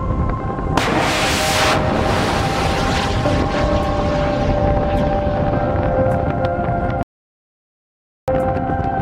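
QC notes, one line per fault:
7.03–8.28 s, audio dropout to silence: the sound stops abruptly and returns abruptly, leaving about 1.25 s of silence with no room tone underneath. Whatever occurred in that stretch is lost, likely because the input signal was cut off while the recorder kept writing silence.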